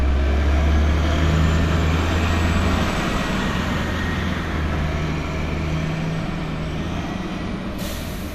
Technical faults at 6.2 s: MP2 compression

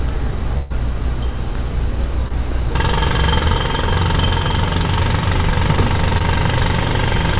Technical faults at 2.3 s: short concealed packet loss

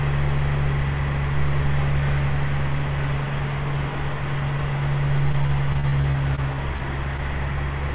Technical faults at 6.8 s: short concealed packet loss

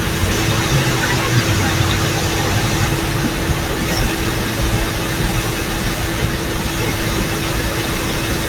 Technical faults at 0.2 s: none

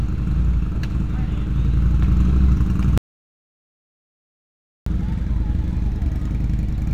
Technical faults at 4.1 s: audio dropout to silence

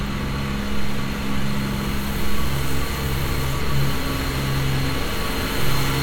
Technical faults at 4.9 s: none

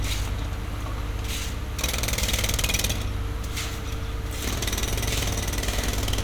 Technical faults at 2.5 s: none

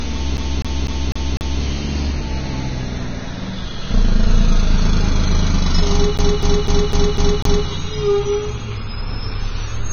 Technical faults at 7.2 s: Vorbis compression; CD stuck on one turn

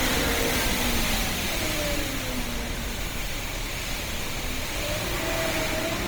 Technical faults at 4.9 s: Opus compression

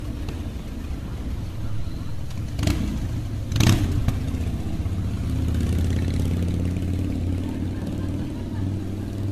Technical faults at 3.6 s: generation loss

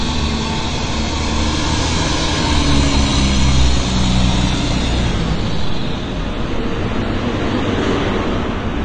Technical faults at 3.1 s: AAC compression

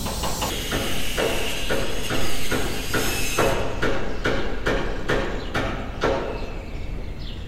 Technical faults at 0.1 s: audio read two samples at a time (double speed)

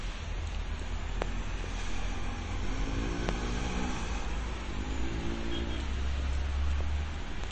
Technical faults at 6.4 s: MP3 compression

